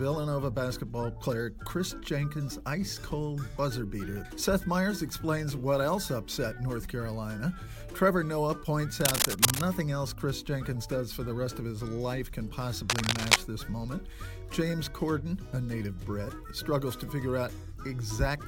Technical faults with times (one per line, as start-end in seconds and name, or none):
9.00-9.62 cable scratch noise
12.90-13.38 cable scratch noise